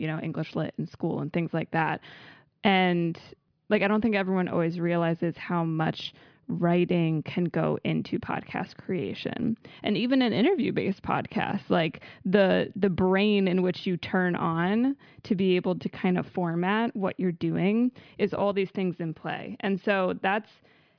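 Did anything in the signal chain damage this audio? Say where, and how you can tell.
No, nothing along the chain seems to have done this speech any harm, and there's no point in the recording where anything goes wrong.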